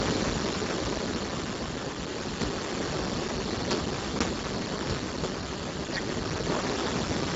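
Speex codec damage runs through the whole clip. The CELP coder has almost no bits left for the excitation, so the speech comes out hoarse, noisy and close to robotic. That fits a setting around 5.8 kbps.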